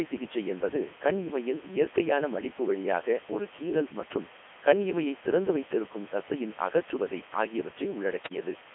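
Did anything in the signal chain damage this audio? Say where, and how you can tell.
Yes. At the sample-format conversion stage the audio was requantised to 6 bits with dither added before rounding. The rounding error became a steady, even hiss lying only about 15 dB below the speech throughout the clip, with no added distortion.

At the codec stage the speech passed through the Codec 2 vocoder at 3.2 kbit/s, confined to a 250 Hz to 3.4 kHz band. Only pitch, voicing, energy and spectral shape survive, and the decoder rebuilds the voice from sine waves, so it sounds heavily robotic and buzzy.

On the radio link, bit errors on digital voice radio hit from 8.23 to 8.40 s, at an error rate of a few percent across what sounds like several vocoder frames. Corrupted pitch, level and spectrum parameters make the voice jump and warble into robotic gibberish there.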